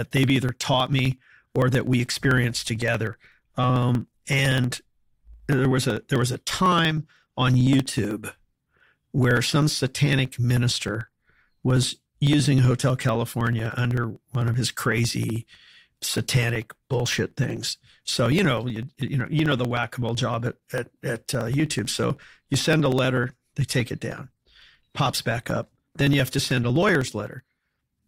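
Speech runs through periodic USB or driver dropouts from 0.11 s to 28.02 s. Every 0.063 s, about 16 times a second, roughly a millisecond of audio is skipped, giving hundreds of evenly spaced ticks that stop in pauses, unlike random network dropouts.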